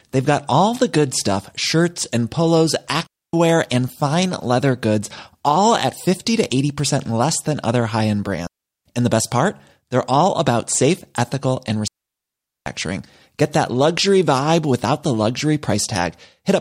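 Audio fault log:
3.07 to 12.66 s, digital wireless dropout: the speech cuts to near silence three times. The first runs from 3.07 to 3.33 s (0.27 s), after "stuff shirts and polos" and before "and fine leather goods". The second runs from 8.47 to 8.85 s (0.39 s), after "than other high end". The third runs from 11.88 to 12.66 s (0.79 s), after "about safe ethical and". Each gap is a clean hole with no noise burst at either edge, because the receiver lost too much of the link's data and muted with a very short fade.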